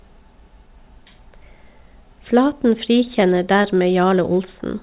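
From 2.78 to 3.83 s the speech carries scattered short gaps: about seven lost or late packets, none longer than roughly 15 ms, each patched by extending the preceding sound, heard as brief ticks and smears against the 4 kHz-limited call audio.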